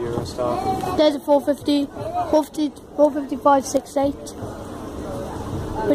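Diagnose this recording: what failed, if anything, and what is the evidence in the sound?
Nothing stood out on listening; there is no audible sign of a failure at any stage of the chain.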